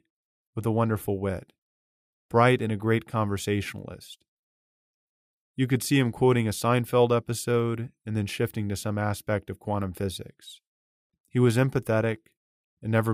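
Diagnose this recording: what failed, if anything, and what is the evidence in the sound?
Nothing failed here: listening across the whole recording, there's no sign of trouble at any stage of the chain.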